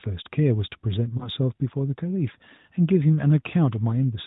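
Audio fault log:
1.18–1.30 s, lost AMR speech frame: a brief dip or warble in the speech. The gap sounds like a single 20 ms frame lost to a checksum failure; the decoder reused the previous pitch and vocal-tract settings at reduced gain, and the voice returns weak for a moment.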